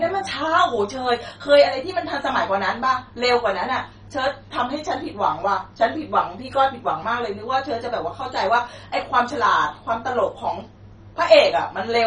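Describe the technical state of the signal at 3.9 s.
At 3.9 s, as throughout, the speech shows likely MP2 compression at a very low rate, around 32 kbps, which switches off sub-bands above 10.4 kHz, leaving dull, gurgling, granular distortion.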